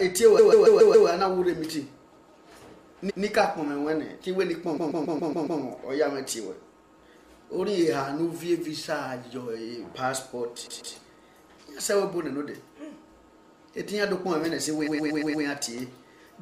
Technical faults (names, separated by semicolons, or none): repeated frames